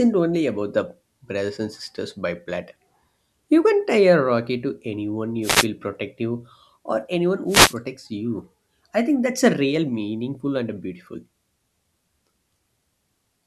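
A speech recording with two wireless microphone noise hits. The first runs from 5.42 to 5.67 s, between "a rocky to anyone" and "protective or anyone". The second runs from 7.47 to 7.75 s, just before "you I think that's". Each is a brief burst of static lasting about a quarter of a second. The radio link from an analogue FM microphone fades as reflected signals cancel. Receiver noise then rises over the voice.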